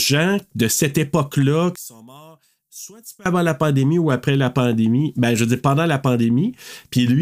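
From 1.76 to 3.26 s, one stereo channel is likely inverted in polarity, so when the two channels are combined the speech common to both cancels instead of adding. The level falls by about 21 dB, and what survives is only the small difference between the channels: a faint trace of the voice. Full level returns at 3.26 s, just before "avant la pandémie ou".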